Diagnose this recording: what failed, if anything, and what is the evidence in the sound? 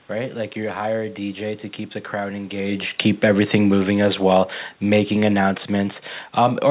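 Automatic gain falling in the call processing stage: from 3.25 s to the end of the speech, the level sinks steadily as the automatic gain control, having judged the input too loud or its background noise too strong, pulls its gain down. Unlike the talker movement around 2.5 s, where only the voice shifts against a steady room noise, here the background sinks together with the voice, which places the change in the gain stage rather than at the microphone. The whole clip stays band-limited to 4 kHz by the G.711 call path.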